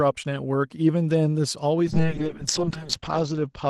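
From 1.91 s onward, a call bitrate drop starves the encoder, leaving the speech coarse and muffled, with bandwidth narrowing from 12 kHz to 8 kHz, consistent with about 7 kbps.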